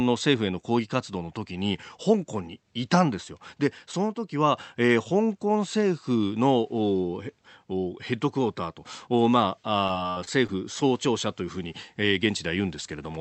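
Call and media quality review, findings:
Repeated packet loss (robotic sound), 9.87–10.50 s. Choppy stretch: six gaps, longest 66 ms, roughly a quarter of the span filled by concealment that stretches the last sound. Probable component: jitter buffer and packet-loss concealment on the call path, with the 8 kHz band edge pointing to an Opus-type wideband codec. Spectrogram: smeared, repeated harmonic frames with abrupt vertical seams. Waveform: short looped segments and envelope steps at each gap.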